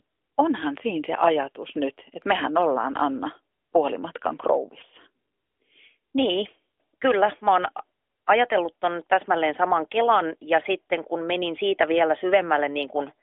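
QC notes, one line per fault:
No faults found; the speech runs over a normal AMR-NB mobile path, band-limited to roughly 300 Hz to 3.4 kHz, consistent with the 12.2 kbps mode.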